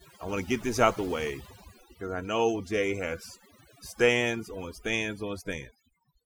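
Overdone noise removal runs throughout: overly aggressive noise reduction zeroes bands near its noise estimate, leaving near-silent gaps with twinkling specks and a patchy, holed spectrogram.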